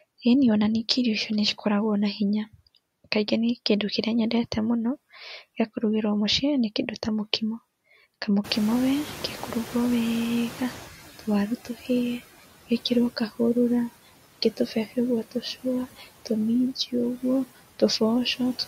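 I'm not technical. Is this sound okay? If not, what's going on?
No. Throughout the clip there are noise suppressor artifacts: a filter lowers the background noise moment by moment, so the noise sinks between words and swells back under them.

The noise suppressor is also catching up. At about 8.5 s the room's background noise jumps sharply, and the filter lags, letting it through louder from 8.44 to 10.95 s before it settles.

Speech is cut by the noise suppressor at 14.57 to 14.97 s, 15.31 to 15.65 s and 15.97 to 16.07 s. The filter mistakes brief bits of speech for noise, so they sound swallowed or faint.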